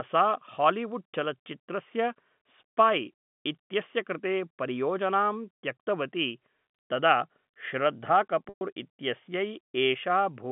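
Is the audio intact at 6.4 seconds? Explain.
Yes, the audio is intact at 6.4 seconds: the speech there comes through cleanly within the narrow G.711 telephone band, with no dropout, click or distortion.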